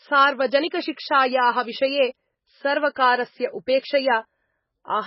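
Likely MP3 compression at a very low bitrate runs throughout, starving the encoder so nothing survives above 5.6 kHz; the speech sounds heavily muffled, watery and swirly.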